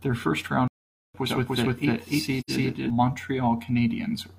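At 0.68 s the speech cuts to silence for 0.47 s, until 1.14 s. This is a playback stall, likely from the player running dry, then resuming.

From 1.26 s to 2.90 s a doubled audio track appears. A second copy, about equally loud, trails by roughly 300 ms. It is dry and starts and stops abruptly.

At 2.40 s comes AAC frame loss with muting. An 85 ms hole fades out and back in, which fits two lost frames.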